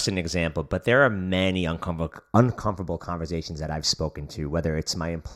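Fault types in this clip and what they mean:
Channel delay (comb filtering): One channel arrives a fraction of a millisecond late, and the two are summed to mono. Sound common to both then cancels at evenly spaced frequencies. Here the first notch sits around 3 kHz, with more notches above it. From 2.12 s, just after "but there are many", to the end, the speech takes on a hollow, phasey color with fixed notches in the upper range.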